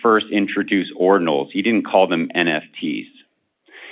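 No technical faults can be heard in this speech, which comes over an ordinary mu-law G.711 telephone channel that leaves nothing above 4 kHz.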